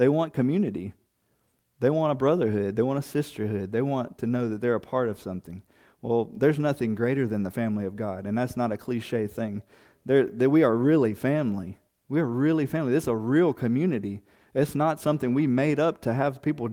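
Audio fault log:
Nothing to log here, as the speech comes across with no faults to report.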